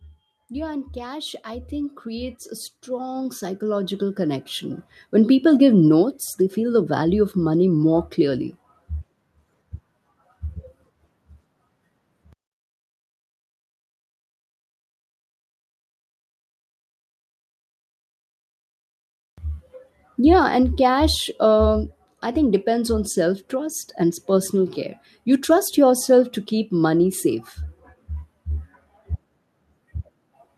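A speech recording whose level climbs steadily from 0.34 s to 5.4 s, rising by about 17 dB before settling just ahead of "give notes they feel". This is automatic gain rising: the gain control judged the input too quiet and pushed its gain up over those five seconds. What separates it from a talker simply moving closer to the microphone is that the background noise swells in step with the voice, so the whole signal is being amplified, not just the speech source.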